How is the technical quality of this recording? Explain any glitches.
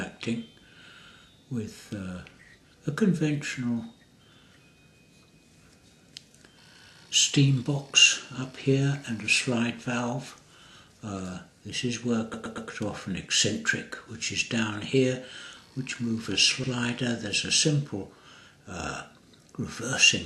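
The recording has two stutters from repeated frames. At 12.33 to 12.69 s, a 120 ms block plays three extra times, and at 16.63 s an 80 ms block repeats once. In each case the same compressed frames were delivered more than once, so the decoder replays that slice of audio, giving a stammer and adding 360 ms and 80 ms respectively.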